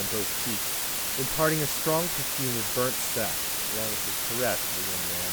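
A constant, even hiss runs through the whole speech clip, roughly as loud as the speech itself, with no crackle or distortion. This is low bit depth with dither: the audio was reduced to just 3 bits, and dither before rounding turned the error into steady white noise.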